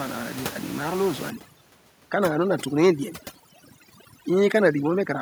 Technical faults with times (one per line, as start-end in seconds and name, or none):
1.30-5.21 overdone noise removal